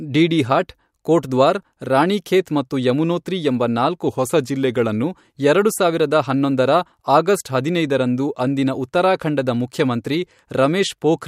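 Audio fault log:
4.07–5.03 s, drift correction step: after "ಮತ್ತು ಯಮುನೋತ್ರಿ ಎಂಬ ನಾಲ್ಕು", speech slows 5.4% and drops 95 cents, likely a one-step clock-matching rate change; spectrogram harmonics step down, then snap back.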